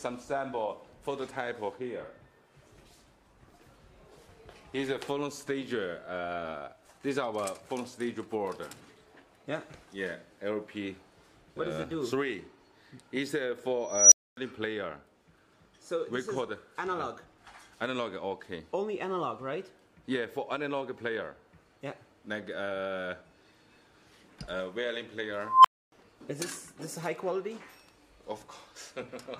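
At 13.87 s an unstable filter takes over. A high tone of around 5 kHz swells over about 0.25 s and clips hard. The sound then drops out for about 0.26 s, ending at 14.37 s. The recursive filter's feedback grew without bound until its numbers overflowed, then it reset. At 25.42 s the same fault recurs with a tone of around 1 kHz. It builds for about 0.23 s, then goes silent for about 0.28 s until 25.92 s.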